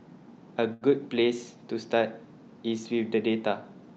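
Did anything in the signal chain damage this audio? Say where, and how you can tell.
Yes, at the network and jitter-buffer stage, a short stall from a late packet between 0.73 and 0.84 s. The sound there is held rather than cut: roughly 78 ms of stretched audio with a slight buzzy, slightly dipped texture, and nothing is lost. A packet arrived after its playout time, the jitter buffer emptied, and the receiver extended the last sound until the packet came, then resumed from the same point. Everything after is about 78 ms later, heard through a call codec limited to about 8 kHz.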